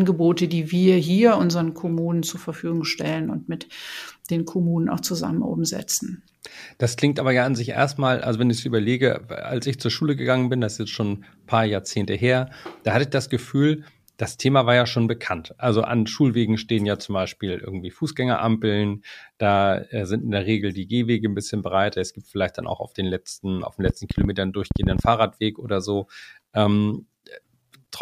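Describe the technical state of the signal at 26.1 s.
At 26.1 s the speech signal is intact, with no audible technical fault at that moment.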